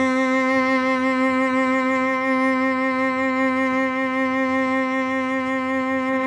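No technical faults can be heard anywhere in this music.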